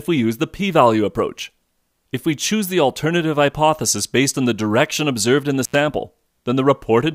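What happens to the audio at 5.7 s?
Right around there, from 5.64 to 5.75 s, there's an intermittent contact: a loose cable or plug briefly loses its connection, so the sound drops out for about 83 ms, with crackle at either edge and a faint hiss while the line is open.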